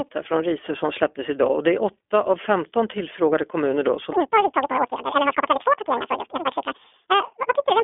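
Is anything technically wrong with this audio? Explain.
Yes. Throughout, the speech sounds thin, boxed-in and audibly rough and synthetic, with nothing above 3.7 kHz and little below 250 Hz. This is the iLBC codec, a narrowband telephone coder that rebuilds each frame's excitation independently, which fits 20 ms frames at 15.2 kbps.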